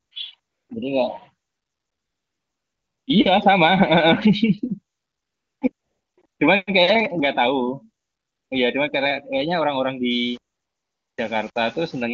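From about 0.05 s to 11.55 s, the phone repeatedly judged the talker silent and stopped sending speech frames, producing AMR comfort noise ten times. The gaps range from 20 ms to 1.6 s, the longest from 1.47 to 3.07 s. The real background gives way to a smooth, steady synthetic hiss that switches in and out, while the surrounding wideband speech stays clean, consistent with a high AMR-WB rate.

From 10.11 to 12.03 s, the audio was most likely rounded to about 7 bits without dither. This is low bit depth without dither, leaving an error roughly 30 dB below the signal that turns quiet passages grainy and gritty.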